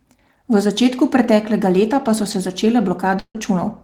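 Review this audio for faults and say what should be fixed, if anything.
From 3.19 to 3.37 s there is a long network dropout, likely caused by audio packets failing to arrive in time. The receiver stretched the last sound into a fading buzz for about 150 ms, then went silent for about 60 ms, and the speech resumed with about 160 ms lost. On a spectrogram, the final harmonics smear horizontally, fade, and leave an empty band before the speech returns. On the waveform, the envelope decays and then flatlines. A deeper jitter buffer, together with forward error correction or retransmission on the link, would prevent this gap.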